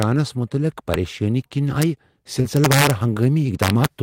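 A speech recording in which a gain or summing stage exceeded its integer range and wrapped to the opposite sign instead of limiting. This integer overflow turns peaks into harsh cracks far sharper than clipping, as brief snaps at 0.03, 0.94 and 1.82 s, and as sustained crackle from 2.57 to 2.91 s and 3.63 to 3.86 s, where the signal runs about 4 to 5 dB past the limit. Short concealed packet loss also occurs: about 20 ms of audio failed to reach the decoder at 2.41 to 2.46 s and at 3.14 to 3.18 s, and the receiver bridged each gap by extending the preceding sound before blending back, leaving a brief smeared wobble.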